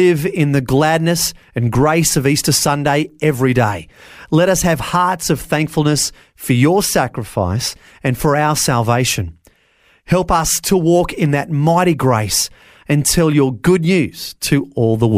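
Speech, with no technical faults to be heard.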